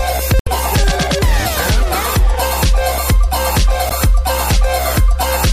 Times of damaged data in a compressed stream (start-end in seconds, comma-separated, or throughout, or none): 0.38-0.48, 3.89-3.93